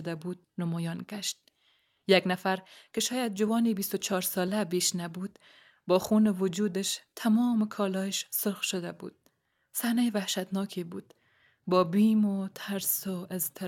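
Listening through this speech recording, nothing stood out as a technical problem.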